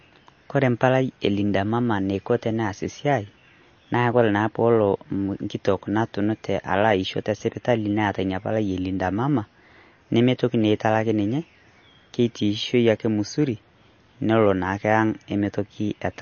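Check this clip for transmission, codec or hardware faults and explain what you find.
One codec fault runs through the whole recording. Throughout the speech, the sound has the watery, swirling quality of MP3 compression, likely from a low-bitrate encode consistent with about 32 kbps. Short of bits, the encoder removed everything above 6.6 kHz and dropped weak frequency lines that flicker frame to frame. A spectrogram shows a hard ceiling at 6.6 kHz with patchy, blocky holes beneath it.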